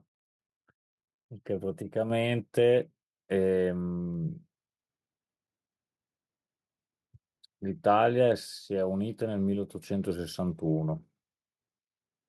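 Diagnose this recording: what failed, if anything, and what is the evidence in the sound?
Call processing stepped up the microphone volume at 2.1 s, raising the device's input gain by about 4 dB at once, so speech and background jump together.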